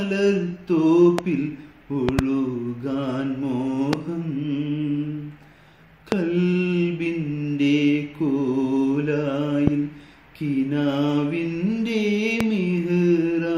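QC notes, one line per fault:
1.19–1.21 s, 2.09–2.21 s (two pops), 3.93–3.95 s, 6.12–6.14 s, 9.67–9.70 s, 12.41–12.43 s: loud pop. A brief voltage pulse, likely from a switch, plug contact or driver glitch, lands on the signal, giving sharp pops about 20 dB above the level while the sound carries on underneath.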